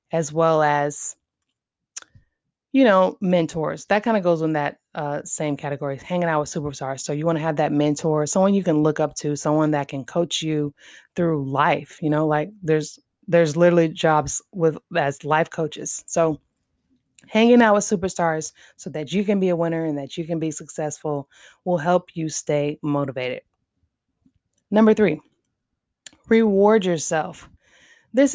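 No technical faults can be heard anywhere in the recording, which keeps a steady, unbroken signal throughout.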